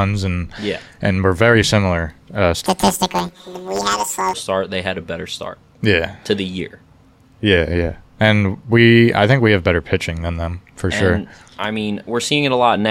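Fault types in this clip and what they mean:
Planar audio read as interleaved: each short block of left-then-right samples gets taken as alternating pairs, so every 10.88 ms chunk plays twice at double speed. From 2.66 to 4.34 s the speech turns into a robotic buzz at about 92 Hz, with no real octave jump.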